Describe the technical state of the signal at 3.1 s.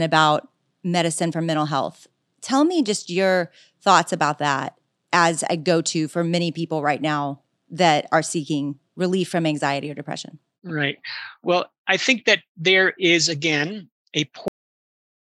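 At 3.1 s the speech signal is intact, with no audible dropout, distortion, clipping or other fault.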